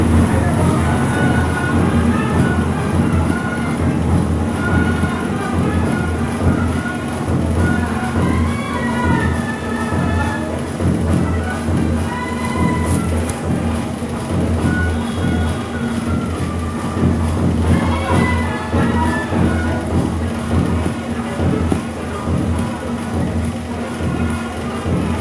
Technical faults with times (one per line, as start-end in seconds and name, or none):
none